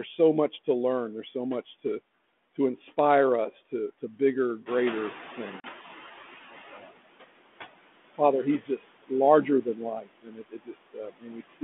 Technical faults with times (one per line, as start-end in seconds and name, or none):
0.00-11.64 noise suppressor artifacts
4.66-6.84 noise suppressor catching up
5.60-5.65 packet loss on an ADPCM call
6.71-6.91 speech cut by the noise suppressor
8.62-9.11 speech cut by the noise suppressor
9.99-11.63 speech cut by the noise suppressor